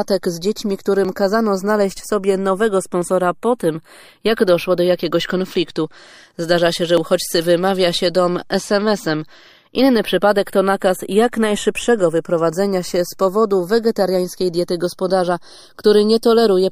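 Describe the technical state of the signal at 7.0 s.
At 6.97 s there is an overlap between stream segments: about 16 ms is trimmed at a segment joint, so the waveform jumps abruptly and a tiny skip is heard, with a thin vertical line on a spectrogram. Throughout this moment the channels are drifting apart, a clock error of a few tens of ppm sliding the inter-channel delay towards a fraction of a millisecond, heard in mono as slow flanging, seen as gradually sweeping comb notches.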